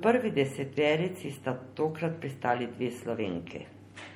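Speech with plainly audible MP3 compression throughout: watery, swirly smearing that likely fits a bitrate around 48 kbps. A spectrogram shows flickering holes, with nothing above 20.9 kHz.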